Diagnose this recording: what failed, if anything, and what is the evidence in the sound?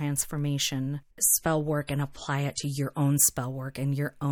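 The network side is the culprit: an adaptive stream at a lower bitrate. From 1.20 to 3.20 s the speech abruptly loses its top end, with nothing above 15.3 kHz, and turns smeary and artefact-laden, consistent with the player dropping to around 40 kbit/s MP3, then snapping back without any gap.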